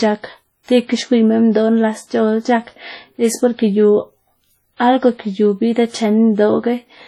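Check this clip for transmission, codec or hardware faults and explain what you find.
One codec fault runs through the whole speech clip.

WMA compression, throughout: likely a heavy WMA encode around 32 kbps, whose long-block quantisation noise smears across syllables, sounding ringing and washy with breathing hiss.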